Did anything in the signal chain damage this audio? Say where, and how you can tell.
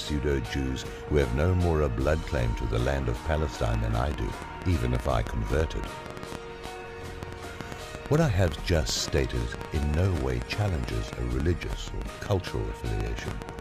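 Yes. From 3.66 s to 13.6 s, a train of clicks sits over the sound, averaging about 7 clicks per second at irregular spacing, around 70 in all. The clicks share much the same sharp shape and peak well above the programme, roughly 15 dB over it, and they continue through pauses. That points to a pulse source independent of the audio itself, likely interference coupling into the analogue wiring or an interface intermittently failing.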